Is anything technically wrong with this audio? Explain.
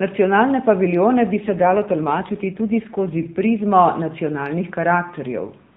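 Yes. From 1.32 to 3.64 s there is an AMR rate drop. The network lowers the AMR codec's bitrate to protect bits against errors. The change in texture fits a step down from 12.2 to 5.9 kbps. The speech turns rougher, buzzier and more synthetic, then recovers. The band stays capped at 4 kHz, as in the rest of the narrowband call, and nothing goes silent. That rules out a dropout or a bandwidth switch.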